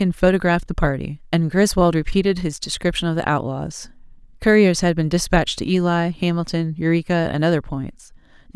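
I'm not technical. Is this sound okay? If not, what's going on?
Yes, nothing wrong can be heard in this recording.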